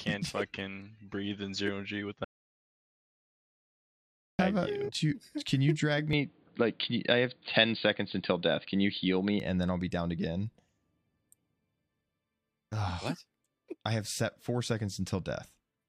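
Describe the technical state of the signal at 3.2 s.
Audio dropout to silence from 2.25 to 4.39 s: total silence with no room tone, unlike a fade. This is likely a lost input recorded as silence.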